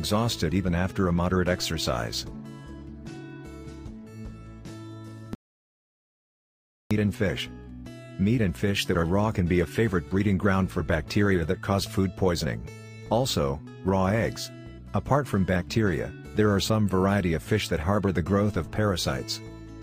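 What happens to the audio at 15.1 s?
Nothing goes wrong at 15.1 s; the audio plays through that moment intact, with no dropout, click, distortion or other audible fault.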